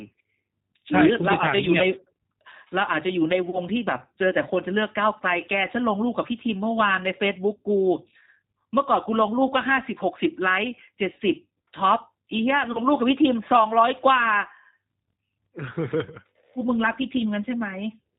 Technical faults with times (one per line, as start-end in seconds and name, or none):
0.00-18.18 G.729 codec
3.50-3.60 VoIP packet loss concealed by the speech codec
12.72-12.80 VoIP packet loss concealed by the speech codec